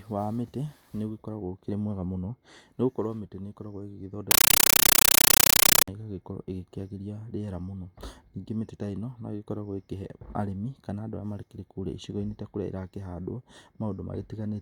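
From 4.31 to 5.88 s, a compressed stream played as audio: undecoded AC-3 frames become 9.3 ms noise bursts, 31 per second, heard as loud chattering static.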